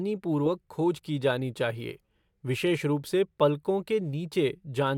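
Speech recording with no audible technical faults at any point in the signal.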